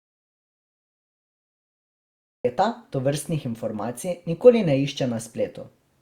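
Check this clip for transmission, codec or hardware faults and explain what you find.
One fault stands out: an audio dropout to silence covering the opening of the speech, from the very start to 2.45 s. The clip begins in dead silence, with no room tone or hiss at all, and then the speech arrives abruptly, already in mid-flow, at 2.45 s. Whatever was said during that first stretch is lost. The likely cause is the input being lost, through a disconnected device, a broken link or a mute, while the recorder kept writing silence until the signal returned.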